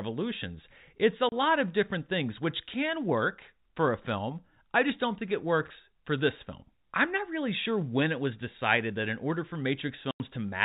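Speech carried over G.711 telephone coding, with its narrow band cut off at 4 kHz, shows packet loss filled with silence in two places. A 30 ms hole at 1.29 to 1.32 s lands just before "of different things which", and a 90 ms gap at 10.11 to 10.2 s follows "that in order for". Both gaps have hard edges where missing audio was replaced by silence, and their lengths fit one and three lost 30 ms packets.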